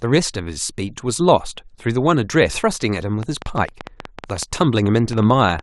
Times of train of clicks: 3.23-5.60

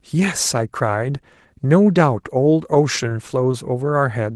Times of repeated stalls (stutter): 2.51-3.55

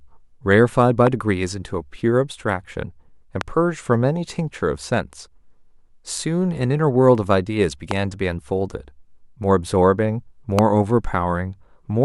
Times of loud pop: 1.07-1.09, 3.41-3.43, 7.91-7.93, 10.59-10.61

